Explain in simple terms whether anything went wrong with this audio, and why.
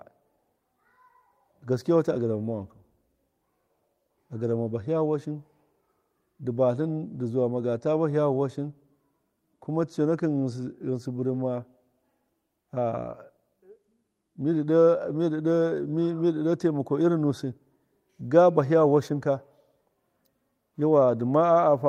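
Nothing went wrong here: the speech carries no audible dropouts, glitches, distortion or level problems anywhere in the recording.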